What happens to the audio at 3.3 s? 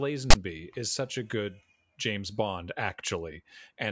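Nothing goes wrong at 3.3 s: the speech there is intact, with no dropout, click, distortion or other fault.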